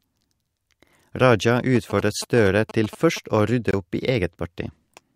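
From 1.75 to 3.18 s there's GSM signalling burst interference: a galloping dit-dit-dit of short buzzes at about 217 Hz, sitting about 15 dB under the speech. A nearby 2G phone was signalling, and the audio circuitry rectified its radio bursts into audible sound.

Then at 3.71 to 3.74 s, just before "opp i", the sound cuts out for about 21 ms and picks up further along, as if it kept playing during the gap. That fits a single lost frame, likely a Bluetooth dropout where packets arrived too late and were discarded.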